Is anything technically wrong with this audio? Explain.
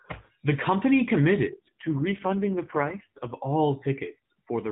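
Yes. From 1.52 s to 3.35 s, just after "company committed", there is an AMR rate drop. The network appears to have told the mobile codec to spend fewer bits on the speech and more on error protection; the roughness fits a fall from about 12.2 kbps to about 4.75 kbps. The voice turns buzzy and synthetic but stays within the same narrow telephone band, with no dropouts. That separates it from packet loss, which leaves gaps, and from a bandwidth cut, which muffles the sound. The clarity returns after 3.35 s, where the narrowband codec is back to its lighter coding.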